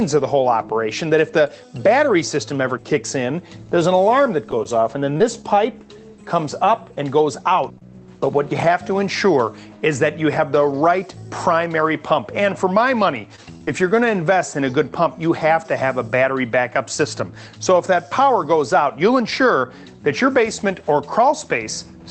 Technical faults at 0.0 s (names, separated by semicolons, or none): none